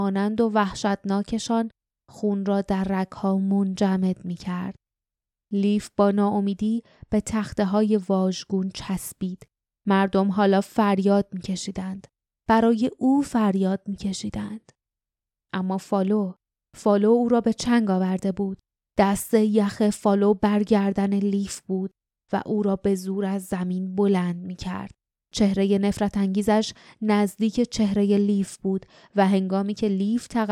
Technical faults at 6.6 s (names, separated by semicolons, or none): none